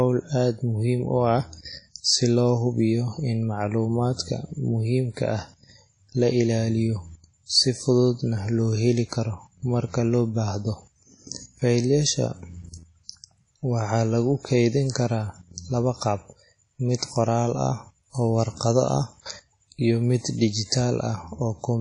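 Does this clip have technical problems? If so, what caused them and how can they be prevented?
Yes. Throughout the speech there is a ringing, washy quality, with a hiss that swells and fades with the signal and nothing above 10.1 kHz. The likely cause is WMA compression at a low bitrate, around 32 kbps. Its long transform blocks smear quantisation noise across tens of milliseconds and drop weaker high-frequency detail entirely. Encoding at a higher bitrate or with a more modern codec would prevent this.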